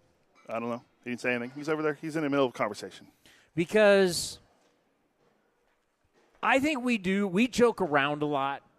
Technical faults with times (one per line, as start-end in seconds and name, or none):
0.51-4.52 periodic USB or driver dropouts